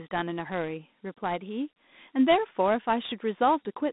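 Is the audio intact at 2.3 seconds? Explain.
No. Dialogic VOX ADPCM coding runs through the whole clip, including 2.3 s. Each sample is stored as a coarse 4-bit step, which fits 32 kbps at 8,000 samples a second. The speech sounds narrow, between 200 Hz and 3.7 kHz, with nothing above 3.8 kHz. A gritty hiss follows it.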